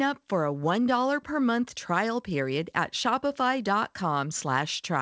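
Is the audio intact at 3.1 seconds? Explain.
Yes, the speech at 3.1 seconds is intact, with no dropout, glitch or distortion at that moment, only the band limit of the G.722 call path, which leaves nothing above 8 kHz.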